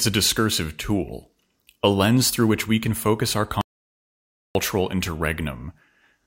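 Speech cuts to silence from 3.61 to 4.55 s. That is an audio dropout to silence, about 0.94 s lost, likely from a lost input.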